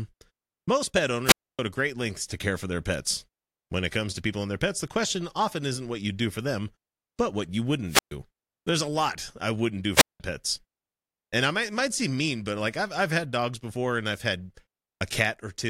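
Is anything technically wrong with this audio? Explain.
Yes. The speech drops out three times, each with a short swell of hiss, a hole of near silence, and the voice returning. This is a wireless microphone squelch dropout. It happens at 1.25 to 1.59 s, after "most pet" and before "to great lengths to", with a 270 ms mute. It recurs at 7.86 to 8.14 s, after "them but what you", muting for 126 ms, and at 9.95 to 10.20 s, after "lot I wouldn't do", muting for 188 ms. Each time the radio link weakened and the receiver's squelch cut the output.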